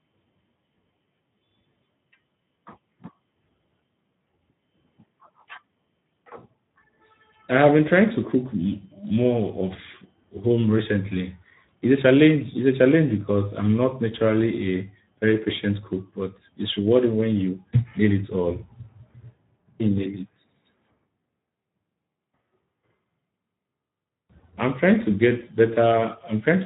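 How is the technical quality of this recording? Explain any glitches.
The recording is degraded by Speex codec damage that runs through the whole speech clip and is plainly audible.

The Speex codec, a CELP coder from older VoIP and game chat, has too few bits here to rebuild the excitation signal faithfully, which fits a setting around 11 kbps. Speech comes out hoarse and grainy, and nothing remains above 3.8 kHz. A plain band-limit would sound muffled but clean. This roughness inside the band marks codec damage.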